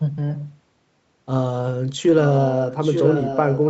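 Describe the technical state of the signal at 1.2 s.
At 1.2 s the speech is intact, with no fault at that moment, just the normal band-limited sound of a call path that carries nothing above about 8 kHz.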